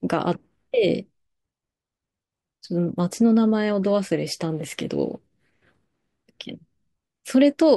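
No technical faults can be heard anywhere in the recording.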